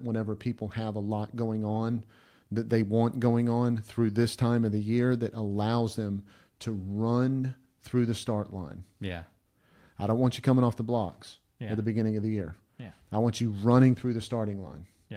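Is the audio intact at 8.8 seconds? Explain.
Yes, the audio is intact at 8.8 seconds, with no fault heard at that moment.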